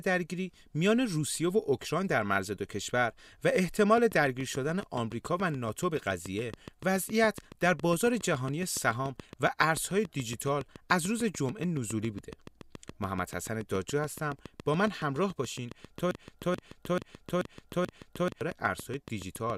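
Interference from nearby equipment or a faulty connection or power supply is the likely source of a train of clicks in this speech recording. From 3.98 s to 19.51 s, similar pulses arrive at a steady 7.1 per second, roughly a hundred in all. They peak about 5 dB above the signal and tick audibly through the pauses as well. Later, the player or stream likely stalled and kept resending its last buffered fragment, causing a broken-record loop from 16.11 s to 18.41 s. A 0.43 s piece repeats exactly five times back to back, and the audio that belonged there is lost.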